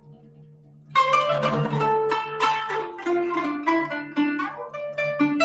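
A speech noise suppressor stays active for the whole clip and keeps mistaking sustained parts of the sound for background noise. It pulls them down and lets them back up over a range of roughly 20 dB, so held tones and tails pump and flutter while sharp attacks pass through largely intact. Ambience and decay thin out, and the level seems to breathe instead of following the sound.

From the start to 0.95 s, the suppressor treats the opening material as noise and cuts it harder than anything after it, by about 18 dB at the deepest point. For close to the first second the sound is sunken. Anything sustained or fading loses its body and tails off early, and only the sharper onsets come through at a reasonable level.

From 1.33 to 3.37 s, the call's bandwidth estimate falls and the Opus encoder gets far fewer bits. The sound points to a drop from about 32 kbps to around 18 kbps, held at the low rate for nearly two seconds. 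Coding becomes coarse, so the audio turns rough and watery with smeared detail. Top end already stops near 8 kHz on this call path, and the roughness lasts until the rate recovers after 3.37 s.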